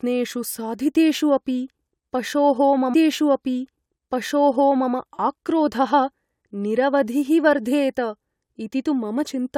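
A speech recording with a stream segment repeated: the player queued or fetched the same chunk of the stream twice, so at 2.93 s, just after "पशोः मम", playback jumps back and replays about 1.98 s of material that was already heard, running until 4.92 s before the programme continues. A small blip marks the jump back, and the repeated passage adds roughly two seconds to the clip's running time.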